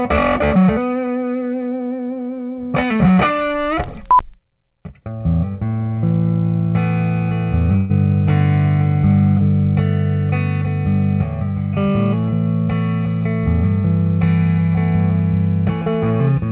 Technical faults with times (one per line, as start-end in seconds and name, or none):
7.76-7.91 burst of packet loss